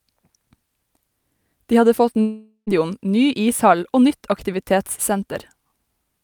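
From 2.21 s to 2.69 s, right after "hadde fått", the speech is replaced by a buzzy continuation of the last sound that fades out over about 0.45 s, followed by about 0.1 s of silence. Speech resumes at "ny ishall og nytt", with about 0.46 s of material simply gone rather than delayed. This is likely a long network dropout, where the receiver concealed the gap by extending the final sound until nothing usable remained.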